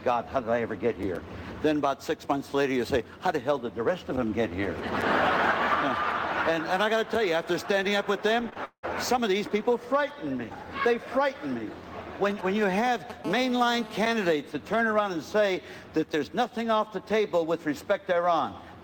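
GSM signalling bursts appear from 4.64 to 5.36 s, roughly 15 dB below the sound. A nearby 2G handset sending only short groups of radio bursts is being rectified by the audio circuitry, producing a galloping dit-dit-dit of brief 217 Hz buzzes.

Short concealed packet loss follows twice in quick succession, at 8.49 to 8.54 s and 8.54 to 8.57 s, each about 20 ms of missing audio. The receiver extended the preceding sound to bridge each gap before blending back, heard as a quick smear or wobble.

A long network dropout comes at 8.65 to 8.85 s. About 180 ms of audio never arrived. The last sound carries on as a decaying buzz or hiss, then roughly 70 ms of near-silence remains before the audio resumes further along. This is likely a network interruption.

GSM signalling bursts return from 12.30 to 13.26 s, now roughly 10 dB below the sound, with the same galloping pattern at a 217 Hz repeat rate.

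GSM phone buzz takes over directly at 13.26 s and lasts until 14.33 s, about 15 dB below the sound. The handset has moved to continuous call transmission, so the rectified 217 Hz pulses become a steady, hard, raspy buzz full of harmonics and unrelated to the audio.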